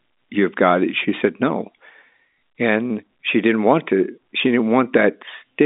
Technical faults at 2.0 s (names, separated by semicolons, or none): none